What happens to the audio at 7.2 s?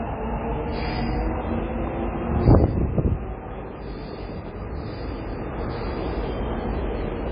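At 7.2 s the sound carries the same MP3 compression damage heard throughout the clip. The content sounds watery and swirly, likely because a starved encoder, fitting roughly 16 kbps, dropped the treble and switched weak frequency lines on and off between frames.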